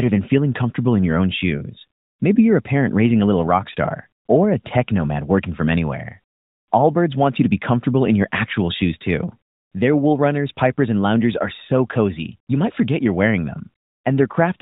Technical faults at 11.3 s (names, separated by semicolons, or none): none